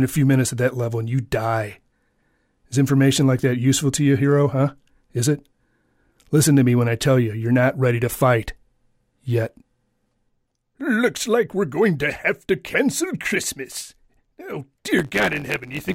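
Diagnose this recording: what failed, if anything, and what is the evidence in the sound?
Block size mismatch (truncated) from 14.98 s to the end. A driver or buffer stage discards each block's tail, giving a 100 Hz buzz and 1.09x speed at near-normal pitch.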